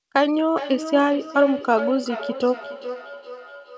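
From 0.57 s to the end, the speech has a feedback echo between two devices. A second device in the room replays the call, and this microphone picks it up again. Each word returns roughly 0.4 s later, thinner and ringing, peaking about 11 dB below the speech.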